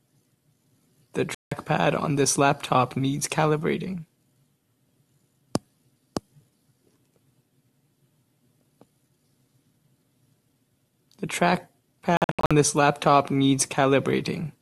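At 1.35 s the speech cuts to silence until 1.52 s. This is a digital broadcast dropout: the receiver lost good frames and muted. At 12.17 s it recurs as several short holes until 12.51 s, the longest about 72 ms.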